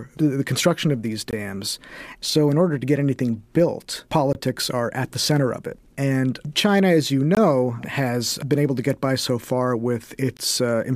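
At 1.31 to 1.33 s, after "the construction of these", the speech stops dead for 20 ms. The same hard-edged hole returns at 4.33 to 4.35 s, between "to get anything built" and "are at the center". It comes again at 7.35 to 7.37 s, between "as you" and "has been able to", and at 10.37 to 10.39 s. This is a gap between chunks. The audio arrives in 3-second blocks, and silence sits at each join. No speech is lost, but the flow breaks on a steady beat.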